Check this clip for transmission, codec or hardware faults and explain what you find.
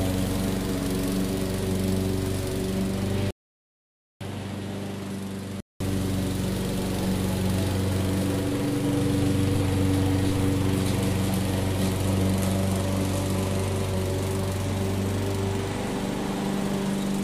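Two faults turn up, and they overlap around the 3 to 6 second mark.

From 3.31 s to 5.80 s the sound goes duller and drops about 5 dB, with nothing above 13 kHz and a faint new background noise sitting far below it, then opens back up. There's a brief 200 ms gap right at the switch. That pattern fits an input switched to a poorer device, most likely another mic or a headset profile with its own narrower band, level and noise.

Inside that stretch, from 3.50 s to 4.21 s, there's a rebuffering stall. Playback ran dry, went silent, then picked up exactly where it left off once more data came in. Nothing's missing, but it adds about 0.7 s of dead air, so the clip runs that much longer than the original.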